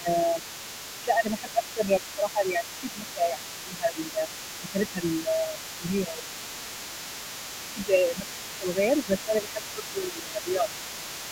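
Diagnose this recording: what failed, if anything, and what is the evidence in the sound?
Speech suppressed in double talk points to the call-processing stage. The talker's speech dips in level at 0.0 to 0.44 s, 1.02 to 4.21 s, 4.61 to 6.58 s, 7.74 to 8.26 s and 8.58 to 10.68 s. The first dip is deepest, at about 15 dB. The later ones reach about 10 dB. The likely cause is an echo canceller that could not tell near speech from loudspeaker echo while both sides talked, so it turned everything down.

The other side's voice leaking through is present for the whole recording. A second voice sits underneath the talker at about 15 dB below the main speech. This also belongs to call processing. The likely cause is that the far end played out of a loudspeaker, reached the microphone, and was not fully removed by the echo canceller.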